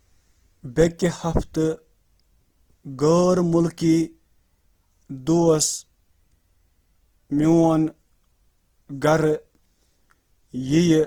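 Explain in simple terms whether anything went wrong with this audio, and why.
Something did go wrong, and it lasts from start to finish of the speech. The voice sounds grainy and rough, as if a fine layer of hiss were woven into it, and this is likely Opus compression squeezing the sound into very little data. It differs from MP3-style damage because there's little watery swirling or warbling; the gaps get filled with noise instead. The top end still reaches high, so it isn't muffled.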